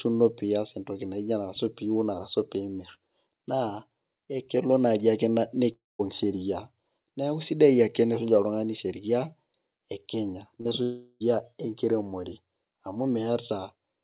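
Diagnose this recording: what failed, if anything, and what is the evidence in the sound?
Network stage, most likely a long network dropout: just after "elelo naaji ake", from 5.72 to 6.01 s, the sound turns into a fading continuation of itself, then falls to silence. From 10.83 to 11.22 s a similar smeared extension covers the gap. In both places real audio returns with material missing.

Short concealed packet loss in the same G.711 call path, band-limited to 4 kHz: at 10.61 to 10.67 s and 10.69 to 10.73 s, brief smears replace about 40 ms and 20 ms of audio. The decoder stretched the preceding sound across each hole, then blended back into the real signal.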